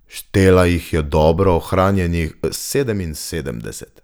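At 2.56 s there's a sudden gain jump: the speech and its background noise both drop by about 6 dB in a single step and stay down to the end. That's likely a digital gain change applied instantly, with no ramp to smooth it.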